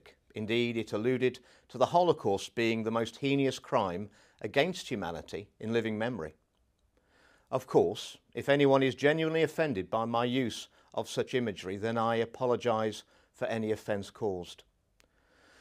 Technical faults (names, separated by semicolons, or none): none